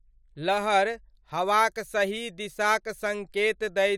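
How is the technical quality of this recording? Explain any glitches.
The technical quality of this recording shows no glitches to explain.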